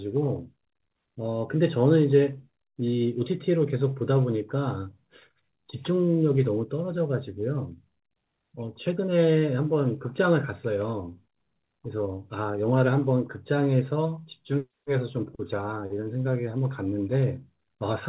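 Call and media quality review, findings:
No findings: the A-law G.711 telephone path works as expected, with the usual narrow telephone band and nothing to report in call or media quality.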